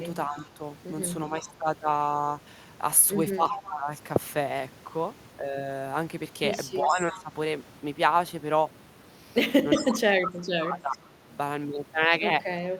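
From 0.27 s to the end, the speech dips and cuts out, at worst by about 25 dB. This is speech suppressed in double talk, likely an echo canceller turning down its own talker along with the loudspeaker echo.

Echo leak comes at 0.38 s, 3.49 s and from 6.89 to 10.98 s: a copy of the speech returns 361 ms late. It is faint at first and nearly as loud at 3.49 s. The likely cause is a speakerphone's canceller letting some echo through.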